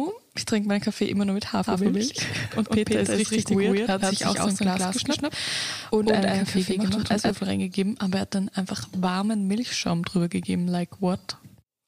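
From about 1.7 s to 7.3 s there's a doubled audio track: a second full-band copy of the sound trails the original by roughly 150 ms, at about the same level. The likely cause is the signal being picked up twice, once through a slower path, or an edit leaving two copies out of step. It sounds like a hard slapback with no decay or room colour, and it switches in and out abruptly at both ends.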